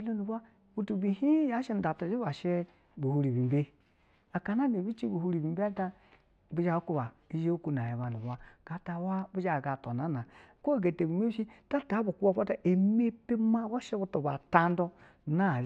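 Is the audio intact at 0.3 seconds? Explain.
Yes, at 0.3 seconds the speech plays through intact, with no dropout, click, distortion or other fault at that point.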